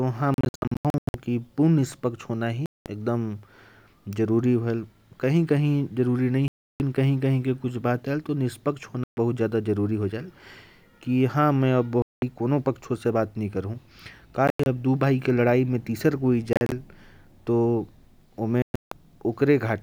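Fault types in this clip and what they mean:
Bluetooth dropout: The speech cuts abruptly to silence eight times and then resumes further along, as if it had kept playing through each gap. Some holes are single clean gaps of about 130 to 320 ms, at 2.66, 6.48, 9.04 and 12.02 s. Others are a stutter of short gaps spread over up to 0.8 s, at 0.34 and 18.62 s. The likely cause is audio packets arriving too late at the headphones and being discarded.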